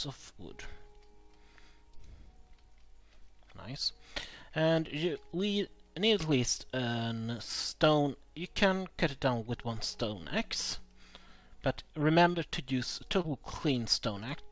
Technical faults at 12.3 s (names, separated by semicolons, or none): short concealed packet loss